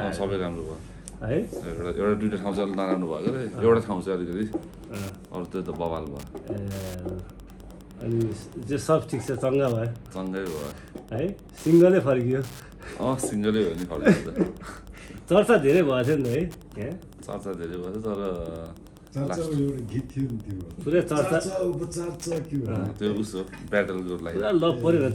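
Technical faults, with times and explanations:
4.25 s to 25.15 s, Wi-Fi interference: a steady ticking comes in at 4.25 s and runs right to the end, repeating every 102.4 ms, so just under ten ticks a second, sitting roughly 30 dB below the sound. That spacing is the giveaway. A nearby Wi-Fi radio fires a beacon at that interval, and the audio circuit rectifies each burst into a little click riding on top of everything else.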